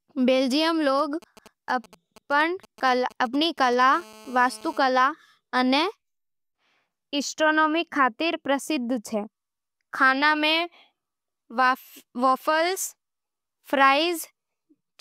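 Speech, interrupted from 0.99 to 3.83 s by a galloping dit-dit-dit of brief 217 Hz buzzes, roughly 25 dB below the voice: GSM signalling bursts from a nearby 2G phone, rectified by the audio circuitry. From 3.93 to 4.78 s a steady, raspy 217 Hz buzz, about 24 dB down and rich in harmonics, is GSM phone buzz from a nearby 2G phone transmitting in bursts during a call.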